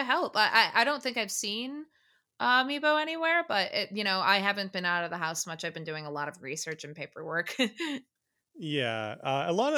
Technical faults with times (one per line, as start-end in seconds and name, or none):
none